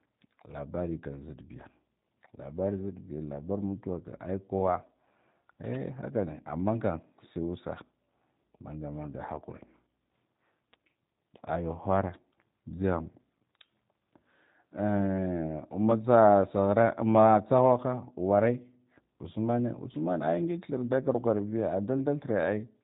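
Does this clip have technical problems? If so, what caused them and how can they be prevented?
Yes, two. The whole clip has that rough, slightly synthetic G.729 codec sound, which fits an 8 kbit/s stream. The codec models each frame as a filter plus a few pulses, and nothing above 3.8 kHz survives. To avoid it, use a wideband or higher-bitrate codec.

There's also a short loose connector crackle from 5.65 to 5.76 s, a scratchy burst where a worn or dirty contact kept breaking and remaking the signal. Clean, reseat or replace the connector and keep cables from moving.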